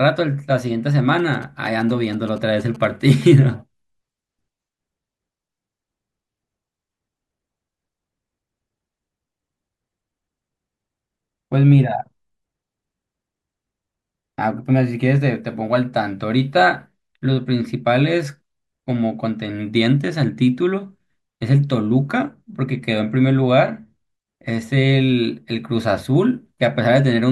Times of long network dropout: none

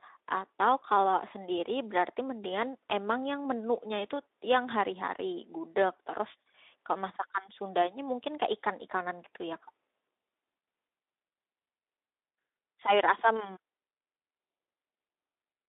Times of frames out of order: none

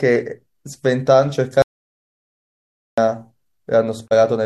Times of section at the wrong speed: none

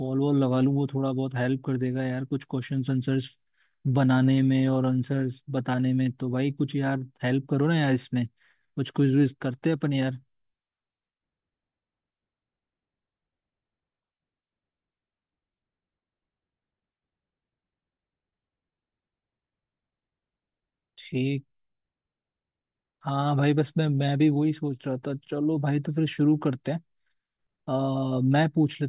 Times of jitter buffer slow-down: none

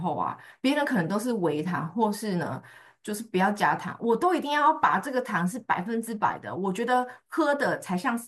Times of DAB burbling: 2.66-2.81

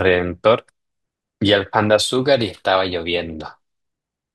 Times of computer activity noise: none

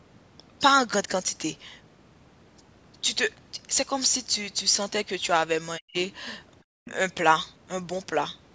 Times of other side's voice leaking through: 6.85-6.95

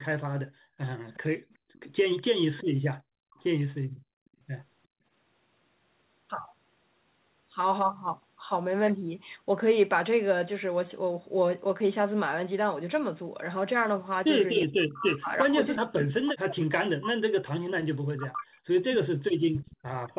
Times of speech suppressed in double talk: 2.46-3.38, 14.63-19.51

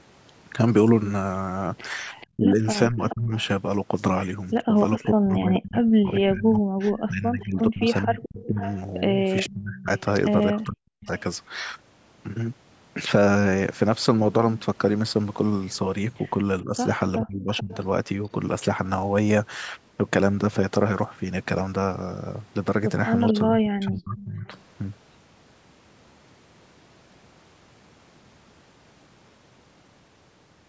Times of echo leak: 2.20-3.47, 4.76-11.22, 17.57-17.75, 23.28-23.39

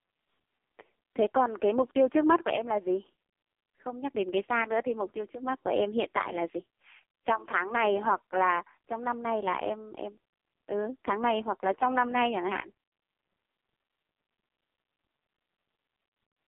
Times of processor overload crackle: none

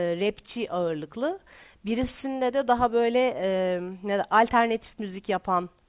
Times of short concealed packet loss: none

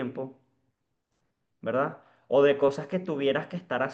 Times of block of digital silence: none

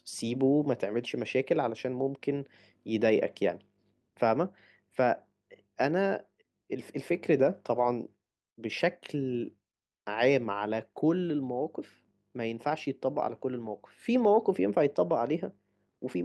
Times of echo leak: none

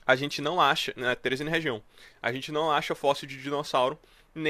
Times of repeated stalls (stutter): none

